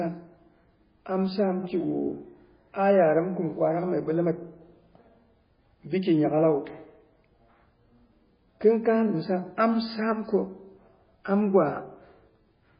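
Throughout, the speech sounds dull and watery, with a swirling, warbling texture and nothing above 5 kHz. This is likely MP3 compression at a very low bitrate, around 16 kbps: short of bits, the encoder removes the treble and drops weak frequency lines, which flicker from frame to frame.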